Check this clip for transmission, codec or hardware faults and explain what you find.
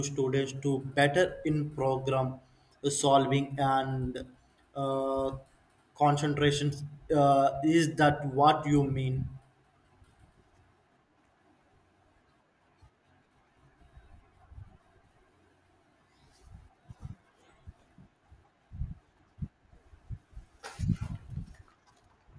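Nothing in the speech points to a transmission, encoding or hardware problem; the signal stays continuous and steady throughout.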